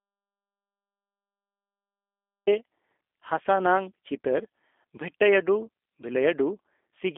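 Speech runs through a G.729 codec throughout, sounding rough and synthetic, with a spectrogram showing energy confined to about 300 Hz–3.5 kHz and nothing above 3.6 kHz, consistent with 8 kbit/s VoIP coding. An audio dropout to silence is already under way at the start and lasts until 2.47 s, appearing as silence with no room tone, likely from the input being lost while the recorder kept writing silence.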